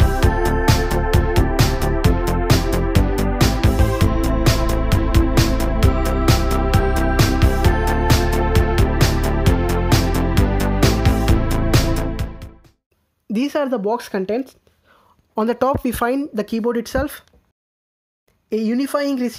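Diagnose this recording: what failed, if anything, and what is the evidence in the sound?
Nothing in the recording points to a failure at any stage of the chain. No event in the sound calls for a diagnosis.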